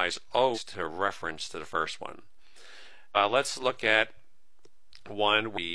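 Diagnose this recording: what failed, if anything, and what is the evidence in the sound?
Three short glitches break into the sound at 0.51 to 0.59 s, 3.12 to 3.17 s and 5.53 to 5.58 s, each lasting roughly 50 to 80 ms. The failure is at the codec stage: damaged data in a compressed stream. Corrupted bytes in those stretches of the file or stream leave the decoder unable to read the affected frames properly, so it misreads or drops them and loses sync until it finds a valid frame header again.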